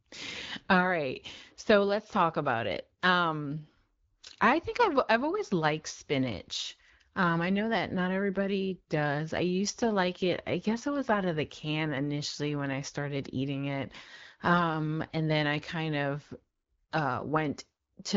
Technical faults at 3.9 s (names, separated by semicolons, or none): none